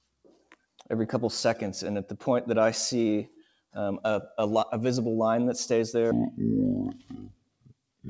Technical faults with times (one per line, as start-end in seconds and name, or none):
0.00-8.09 noise suppressor applied to music or sounds
0.07-0.60 sound cut by the noise suppressor
3.36-3.75 sound cut by the noise suppressor
6.11-8.09 section at the wrong speed
6.95-7.76 sound cut by the noise suppressor